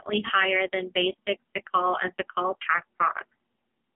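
Speech is heard through an AMR narrowband mobile codec throughout. Nothing above 3.7 kHz survives. The heavy buzzy, synthetic texture points to a low bitrate near 6 kbps.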